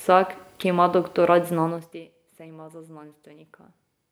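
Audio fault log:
Nothing stood out on listening to this speech recording.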